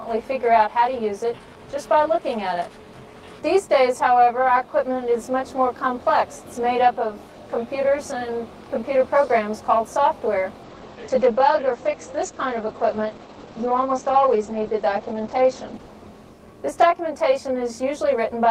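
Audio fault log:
Throughout: channel delay (comb filtering). One side arrives around 20 ms late, and once the two channels fold to mono, the shared content cancels at evenly spaced frequencies starting low, around 20 Hz. That leaves fixed notches and the rough, slightly doubled sound you hear the whole way through.
10.65 to 16.93 s: call bitrate drop. The top end closes in from 20 kHz to 8 kHz and the texture goes rough and watery, which fits the encoder falling from about 32 to 14 kbps. It sits at its worst for about 5 s before recovering.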